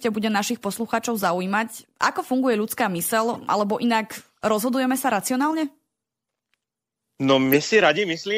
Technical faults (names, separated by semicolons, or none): corrupt frame decoded